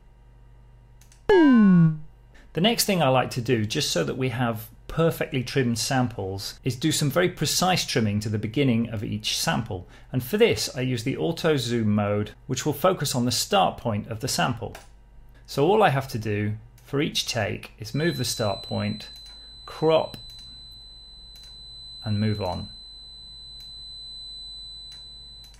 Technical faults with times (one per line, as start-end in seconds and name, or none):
17.87-25.59 feedback whistle